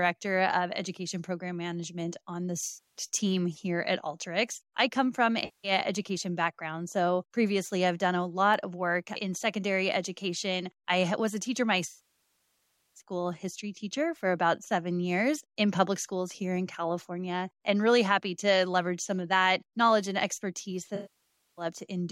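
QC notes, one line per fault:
2.67–3.04 s, AAC frame loss with concealment: between "on the" and "team here at", about 0.28 s of audio is missing. The decoder reuses the last good spectrum, leaving a smeared, noisy patch.
5.45–5.72 s, AAC frame loss with concealment: about 0.19 s is lost and rebuilt from the previous spectrum with scrambled phase, so it sounds like a brief phasey smear.
11.89–13.01 s, AAC frame loss with concealment: after "I was a teacher", about 1.07 s is gone. The repeated spectrum decays to a very faint noise floor, then fades back in before "history teacher for about".
20.95–21.65 s, AAC frame loss with concealment: after "that knowledge and expertise", about 0.62 s is lost. The concealment smears the last good spectrum and fades it down as the gap continues.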